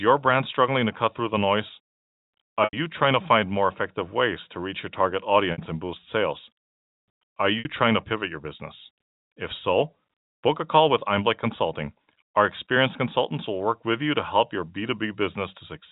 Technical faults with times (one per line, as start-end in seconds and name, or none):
2.64-2.73 packet loss with pitch repetition
5.52-5.58 packet loss with pitch repetition
7.59-7.65 packet loss with pitch repetition